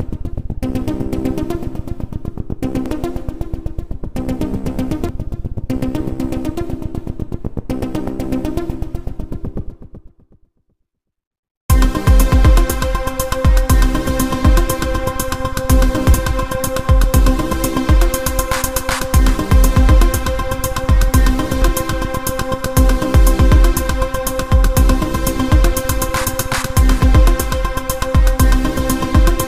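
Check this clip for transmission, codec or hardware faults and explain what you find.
There is one recurring fault. Damaged data in a compressed stream hits at 2.86, 5.09, 16.14, 21.62 and 27.01 s. Corrupted bytes make the decoder misread those frames and lose sync until it finds the next frame header, so each spot is a short chirp or blip.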